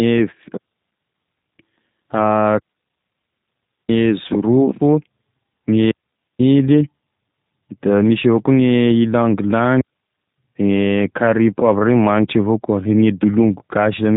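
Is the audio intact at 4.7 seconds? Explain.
No. At 4.7 seconds, as across the whole clip, the speech carries G.729 codec damage, and it is plainly audible. The codec rebuilds each 10 ms frame from a vocal-tract filter, a pitch predictor and a few coded pulses, which fits an 8 kbit/s G.729A stream, so the voice sounds rough and faintly synthetic, with nothing above 3.8 kHz. A plain low-pass filter would dull the sound without that rough, synthetic, reconstructed texture, and packet loss would leave gaps rather than this constant roughness.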